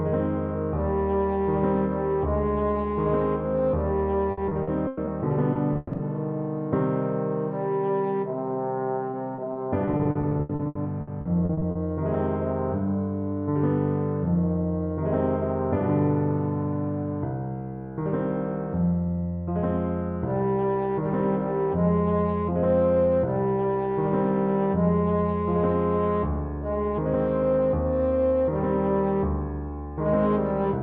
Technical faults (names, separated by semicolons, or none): repeated packet loss (robotic sound)